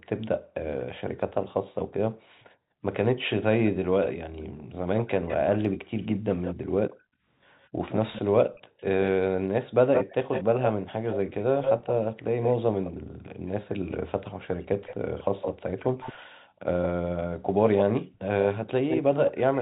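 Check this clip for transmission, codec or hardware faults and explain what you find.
Three echo-canceller faults are audible in this speech clip: repeated gating of the background, an echo leak running from 4.97 s to the end, and one short stretch of speech suppressed in double talk. The band stops at 4 kHz, as expected for a G.711 mu-law call path.

Background gated by the echo canceller occurs at 0.38–0.54 s, 2.10–2.82 s, 4.44–4.73 s, 6.95–7.25 s, 13.02–13.35 s and 16.34–16.60 s. Each time the far end's loudspeaker signal was active, the canceller's suppressor clamped the microphone path. The room tone drops by about 40 dB in most cases, and by about 29 dB and 32 dB in the 6.95 s and 16.34 s events. The background vanishes briefly and then snaps back.

An echo leak starts at 4.97 s and continues to the end. A copy of the speech returns 158 ms late and sits only a few dB below the direct signal. 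The likely cause is a loudspeaker-side canceller that failed to model the acoustic path fully and passed residual echo back into the call. The result is a delayed second copy of the voice.

Speech suppressed in double talk appears at 5.46–5.78 s, a dropout of roughly a third of a second. The talker's level falls very steeply while the other side is also active. The likely cause is the canceller misreading simultaneous speech from both ends as echo and attenuating the near-end talker together with it. The talker's voice is pushed down and then returns.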